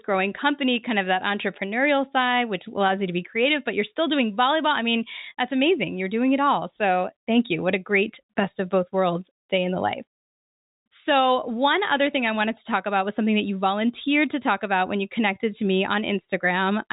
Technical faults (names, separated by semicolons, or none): none